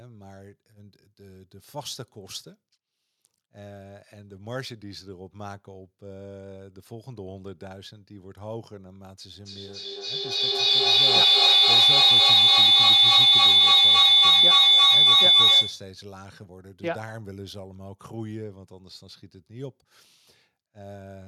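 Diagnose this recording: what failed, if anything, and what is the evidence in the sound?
Feedback howl, at the call-processing stage. From 9.4 s a tone near 4 kHz rises out of the speech and grows until it sits about 20 dB above it. It pulses roughly every 300 ms. It stops at 16.0 s. Two devices in one room were on the same call. Each trip from microphone to loudspeaker and back added gain, so the repeats grew instead of fading. The loop's favoured frequency took over. The pulse rate reflects the loop's delay.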